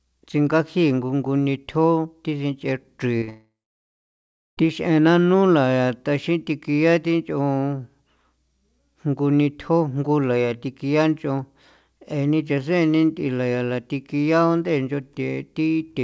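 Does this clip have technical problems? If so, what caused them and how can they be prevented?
Yes. At 3.18 s and 3.24 s there are two brief smeared wobbles, each about 40 ms long. This is short concealed packet loss: those slices of audio reached the decoder too late, so the receiver extended the preceding sound across each gap and then blended back into the real signal. A larger jitter buffer, or forward error correction on a lossy link, would prevent this.

From 3.30 s to 4.59 s the sound becomes a fading continuation of the last sound, then roughly 1.05 s of silence, and resumes with about 1.3 s of material gone. This is likely a long network dropout. No packets arrived, and concealment faded out before the stream recovered. A more stable connection, such as wired rather than congested Wi‑Fi, with redundancy enabled, would prevent it.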